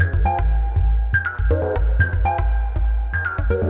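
Sound carried over a WebRTC call path with the band stopping at 4 kHz, consistent with narrowband G.711 mu-law coding, and no faults to report.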